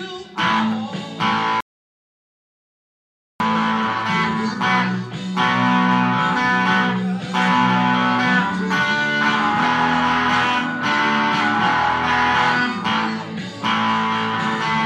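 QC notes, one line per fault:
1.61 to 3.40 s, audio dropout to silence: the sound cuts off abruptly and returns mid-flow after about 1.8 s of silence with no room tone, so anything in that span is lost. This is likely an input interruption while recording continued writing silence.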